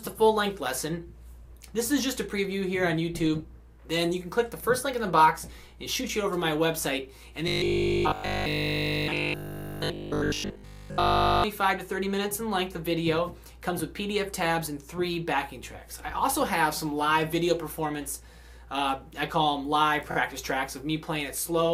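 From 7.48 to 11.44 s the audio goes robotic: a rigid, metallic buzz at 50 Hz takes over, and the original only shows through roughly. The likely cause is repeated short buffers. New audio wasn't arriving often enough, so the playback side kept looping the last stretch, about 20 ms judging by that 50 Hz rate, while the real material got skipped. Pretty much the whole passage is made of those repeats.

Then at 20.10 to 20.15 s there's a quick stutter from repeated frames. One compressed block of 23.2 ms, which fits a 1024-sample frame at 44.1 kHz, got played two extra times. The decoder just runs that same sliver of sound three times in a row, so the clip comes out 46.4 ms longer than it should be.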